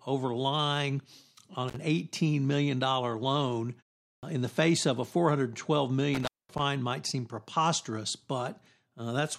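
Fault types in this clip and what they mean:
intermittent contact: a loose cable or plug opening briefly, so the speech breaks out with crackle at the edges, for about 46 ms after "over lying on" and about 218 ms before "might seem preposterous"; unlike a gate, the breaks ignore pauses.
clipped start after a pause: the output device sleeping through a 0.4 s gap, so about 89 ms is swallowed after "million loan" and "in the face of" starts abruptly, with no crackle.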